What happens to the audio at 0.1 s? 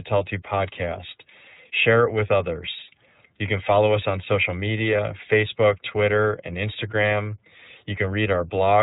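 At 0.1 s you're already hearing the iLBC codec, and it stays on the speech for the whole clip. Each 30 ms block gets its excitation coded on its own, without leaning on the block before, and nothing above 4 kHz survives. The damage is plainly audible: the voice is muffled, narrowband and a bit rough and synthetic. The roughness fits iLBC's 13.33 kbps mode.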